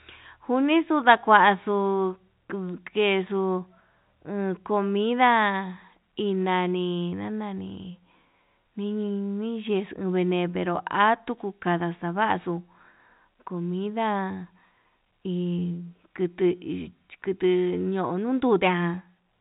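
Listening to this speech recording, heard through a telephone-band channel with nothing above about 3.8 kHz, nothing stood out.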